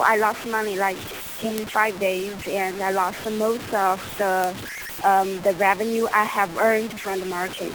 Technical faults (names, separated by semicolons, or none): low bit depth without dither